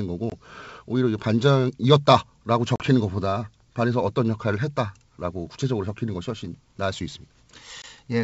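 Packet loss on an ADPCM call hits this speech at 0.30, 2.76 and 7.82 s, leaving hard-edged silent gaps of 20, 40 and 20 ms, consistent with one or two dropped packets. The decoder's predictor and step size then lag, so speech resumes slightly distorted before settling.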